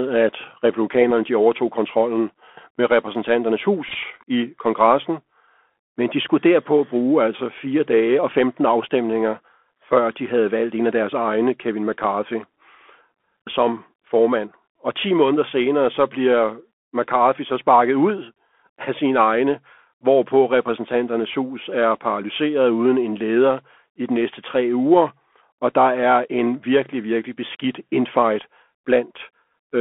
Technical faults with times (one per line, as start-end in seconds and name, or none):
0.00-29.81 Bluetooth CVSD headset codec
3.88-3.96 Bluetooth headset packet repeated
18.68-18.72 Bluetooth headset packet repeated